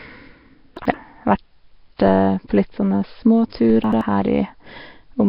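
Throughout, the speech has a rough, hissy halo, a smeared, underwater quality and nothing above 5.3 kHz. The likely cause is heavy Nellymoser compression, which fits a bitrate of about 22 kbps.

From 0.77 to 0.94 s, the speech jumbles briefly. Chunks arrived out of order: one 85 ms chunk plays one chunk late, leaving three hard joins.

At 3.70 s, a low thump or click marks a DC step. The waveform's zero line jumps, and the offset then decays away.

From 3.84 to 4.01 s, the same out-of-order chunk fault recurs, with one 85 ms chunk played one chunk late.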